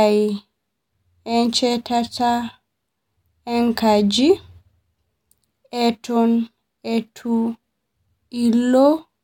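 A speech recording, and nothing is technically wrong with it.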